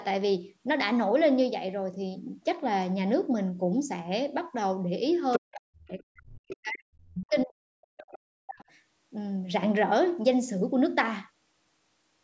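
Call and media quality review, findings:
Other side's voice leaking through: far-end speech at 5.33–5.55 s, 6.52–6.56 s, 7.10–7.24 s and 7.97–8.18 s, loudest in the first burst. Likely echo canceller residual from loudspeaker pickup.

Speech suppressed in double talk: near-end speech dips deeply, by around 40 dB, at 5.38–6.91 s and 7.16–8.67 s. Likely echo canceller attenuating both talkers during overlap.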